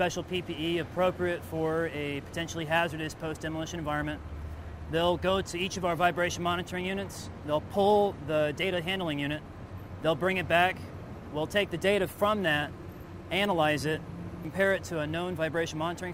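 Sample clock jitter runs through the whole clip. The converter's timing wobbles by a few microseconds, so the sample points land slightly off and produce a gritty hiss roughly 30 dB under the audio that thickens on loud, bright passages and vanishes in quiet gaps.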